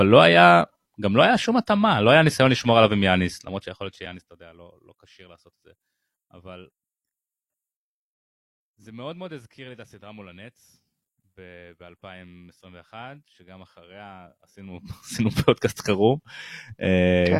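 A short click or brief buzz interrupts the speech at 2.61 s and again at 4.06 s. Each is a repeated buffer. New audio did not reach the output in time, so the device played its last block again, twice more, with a hard join at each repeat. The block lasts about 1.45 ms, which fits a 64-sample buffer. That is far too short to hear as a stutter. Little or no audio seems to be lost.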